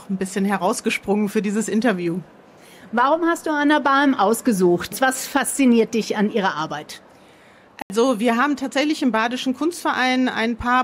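At 7.82 s the sound drops into a block of digital silence for 80 ms, silence with hard edges, so you hear a short hole in the sound.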